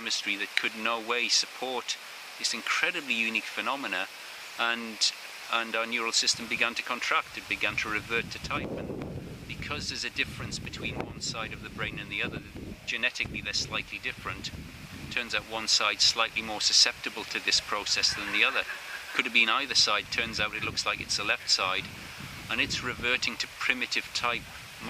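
Dropped buffers (overrun) at 10.65 s and 16.08 s: the sound jumps ahead abruptly, losing a millisecond or two each time. The likely cause is audio overwritten by the hardware before the program collected it, leaving the surrounding audio spliced directly together.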